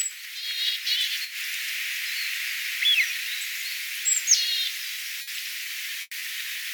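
Repeated packet loss (robotic sound) runs from 5.21 to 6.23 s. Over this second, four separate holes open in the stream, totalling about 200 ms, with the longest lasting 100 ms. Each one is papered over by stretching the last good sound forward, so roughly a fifth of the span is stand-in audio. Because the patches arrive in quick succession, the passage turns choppy and takes on a robotic edge, with small pieces dropping out.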